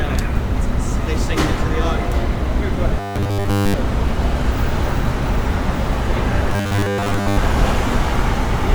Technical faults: robotic sound from repeated short buffers

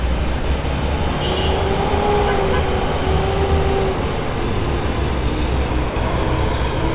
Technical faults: sound dropped by the voice detector

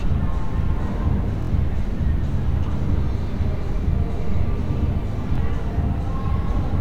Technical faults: Bluetooth stutter

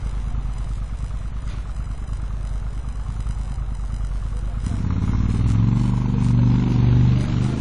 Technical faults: WMA compression

